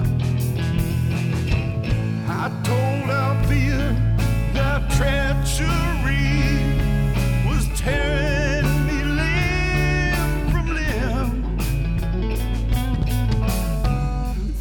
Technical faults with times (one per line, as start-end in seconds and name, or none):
3.40-14.61 mains hum